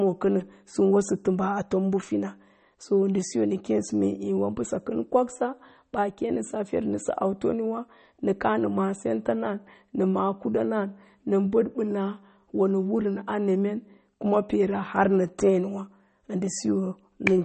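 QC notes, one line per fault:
Throughout, MP3 compression: the speech is plainly damaged by lossy coding, with nothing above 8.4 kHz, so sibilants and consonant edges are dull and clipped at a hard ceiling. The bit budget sounds very tight, which fits a rate around 32 kbps, and the likely cause is a low-bitrate MP3 encode. Weak frequency components drop in and out between frames, giving a watery, swirling texture behind the voice, and s sounds turn metallic and chirpy.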